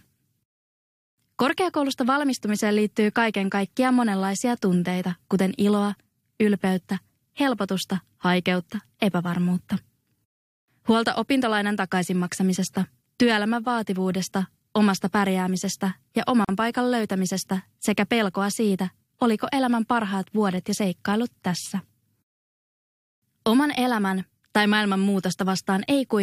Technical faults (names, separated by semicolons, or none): gap at a join of encoded pieces